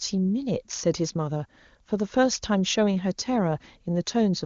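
Nothing's wrong with this speech recording; it sounds like it came over an AMR wideband (HD Voice) link running at one of its higher rates, where the coding leaves little audible trace.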